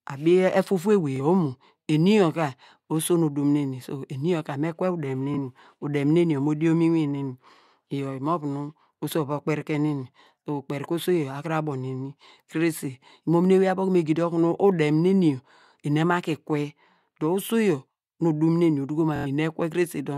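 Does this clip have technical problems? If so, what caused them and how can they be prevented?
Yes. Bluetooth stutter at 1.16–1.20 s, 5.34–5.37 s and 19.16–19.27 s: the receiver repeated its last buffer over 23 ms of lost audio twice, then 93 ms, which fits four dropped packets. Keep transmitter and receiver close, unobstructed and away from 2.4 GHz interference.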